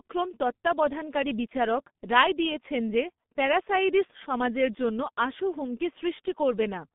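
G.723.1 codec damage runs throughout the speech: the sound is confined to roughly 150 Hz to 3.6 kHz, and its coarse 30 ms frames and slowly updated voice model, consistent with a rate near 6.3 kbit/s, leave it muffled and hoarse with smeared consonants.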